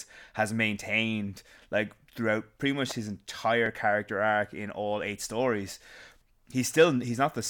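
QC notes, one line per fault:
2.90 s electrical switching spike: a sharp snap sits on top of the speech, likely an arc from a nearby switch; it shows as a thin vertical broadband line.
3.66–3.68 s overlap between stream segments: about 21 ms of speech is cut away at a segment join, which fits 2 s segments. The waveform jumps abruptly, heard as a tiny skip.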